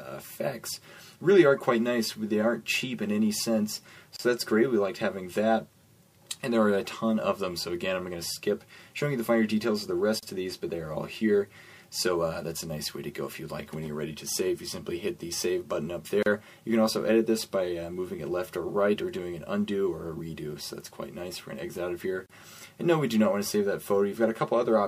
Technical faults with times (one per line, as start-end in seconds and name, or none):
4.16-4.19 gap at a join of encoded pieces
10.19-10.23 gap at a join of encoded pieces
16.23-16.26 gap at a join of encoded pieces
22.26-22.30 gap at a join of encoded pieces